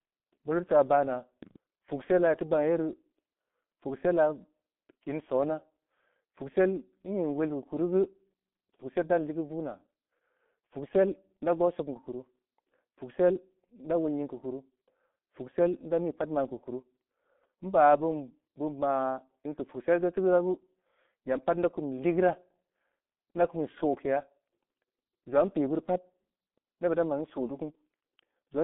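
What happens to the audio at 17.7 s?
At 17.7 s you're hearing G.723.1 codec damage, which runs through the whole clip rather than starting there. The speech is squeezed into a phone-line band of roughly 200 Hz to 3.5 kHz, with nothing at all above 3.8 kHz, so it sounds muffled. The coarse, slowly updated voice model makes it hoarse and smears the consonants. The damage is heavy, which fits a bitrate around 6 kbit/s.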